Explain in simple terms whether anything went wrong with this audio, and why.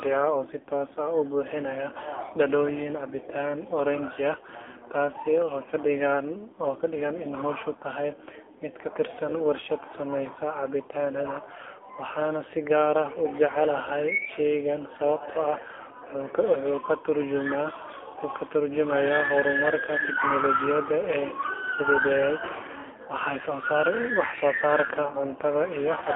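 Yes, something went wrong. From start to finish, this speech has been squeezed through the AMR narrowband mobile codec, the one old 2G and 3G phone calls use. The line only carries roughly 300 Hz to 3.4 kHz, so the voice loses its low body and all its crisp top end. The codec rebuilds the voice from a rough model of the mouth and throat, and at the low setting used here that leaves a clearly buzzy, synthetic edge on everything.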